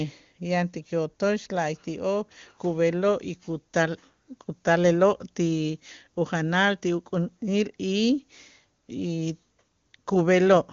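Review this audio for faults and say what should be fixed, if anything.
No faults; nothing needs fixing.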